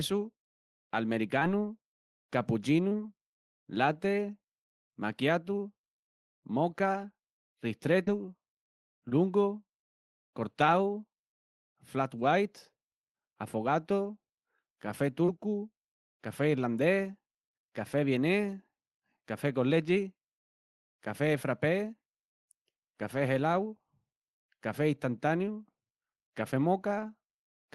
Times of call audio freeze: none

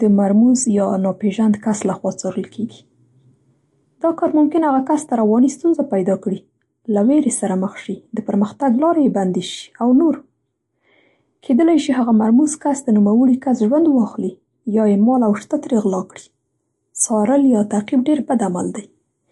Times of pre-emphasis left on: 15.46-19.31

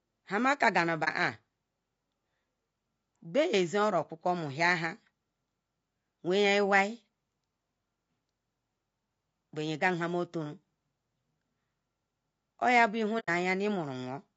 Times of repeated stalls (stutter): none

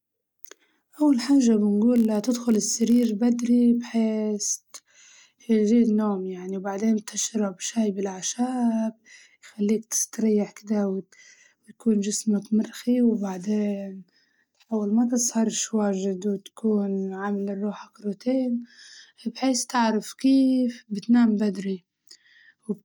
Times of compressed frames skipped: none

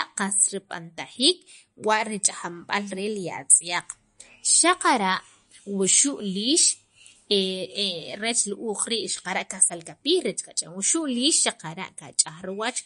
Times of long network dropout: none

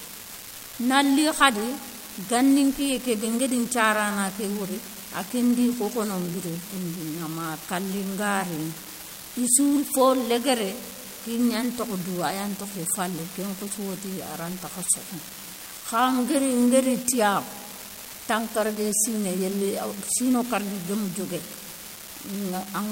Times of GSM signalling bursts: none

